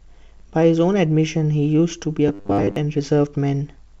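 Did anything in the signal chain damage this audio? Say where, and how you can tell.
Yes. Small hiccups recur unevenly throughout. This is clock drift between sender and receiver at the buffer stage, with the sender's clock running about 4 percent fast.

From 0.05 to 3.91 s, the tempo wavers slightly. These are repeated timing corrections, as the jitter buffer trims short pieces to keep up with audio arriving at 104 percent speed.

From 2.28 to 2.76 s, the speech becomes a rigid, metallic 100 Hz buzz. The likely cause is robotic sound from repeated short buffers: about 10 ms pieces loop while most of the real audio is skipped.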